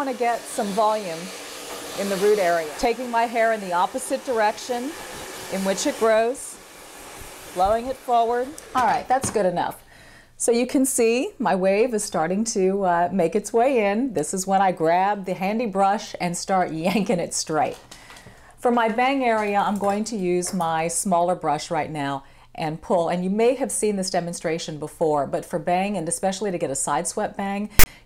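At 27.79 s, near the very end, a block of metadata is handed to the decoder as though it were audio, the fault known as file tags played as audio. The tag block holds text followed by zero padding. The text bytes become a loud, harsh rasp pushed off-centre, because character codes all sit on one side of zero. The padding then reads as flat silence, so the burst ends abruptly at 27.86 s with hard edges at both ends.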